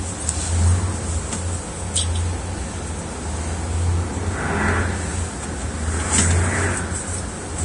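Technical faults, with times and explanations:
Throughout: Vorbis compression. Nothing is present above 10.6 kHz, and the remaining treble is hissy and grainy, with roughened tones and smeared attacks. This heavy damage likely comes from low-bitrate Vorbis encoding, around 32 kbps, where coarsely quantised residue replaces fine detail with noise.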